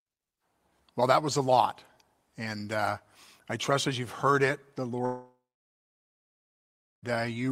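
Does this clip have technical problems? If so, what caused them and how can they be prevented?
Yes. Right after "you've heard it the", at 5.05 s, the speech breaks off and the last sound smears into a fading buzz for a few tenths of a second, then near-silence holds until 7.17 s, when speech resumes with about 2 s missing. This pattern points to a long network dropout as the likely cause: packets stopped arriving, the receiver concealed briefly, then gave up. On a spectrogram, harmonics blur into a decaying smear, then a blank band about 1.65 s wide; the waveform flattens to near zero. A more stable connection, or forward error correction with a deeper jitter buffer, would prevent it.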